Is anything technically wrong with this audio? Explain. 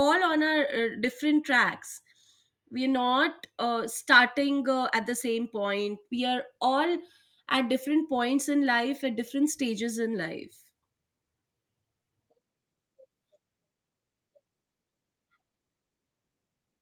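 No, nothing is technically wrong with this audio.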